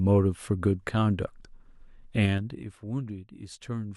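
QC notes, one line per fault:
2.20–2.80 s, zipper noise: level drops roughly 15 dB in 3 dB steps, about seven per second, each unsmoothed jump ticking audibly over the speech.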